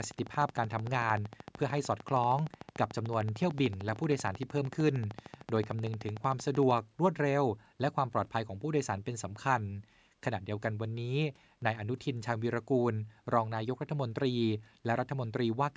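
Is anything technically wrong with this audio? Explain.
Yes. From 0.04 s to 6.79 s, an even ticking runs through the speech and its pauses at about 13.2 clicks per second, around a hundred in all, peaking slightly louder than the speech. This train of clicks is likely interference or a faulty connection or power supply repeatedly injecting the same pulse.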